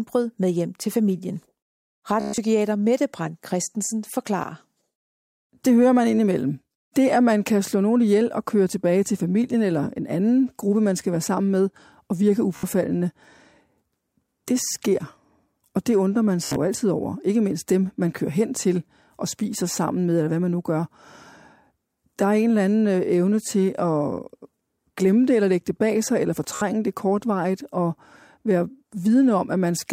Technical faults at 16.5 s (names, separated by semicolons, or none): Bluetooth stutter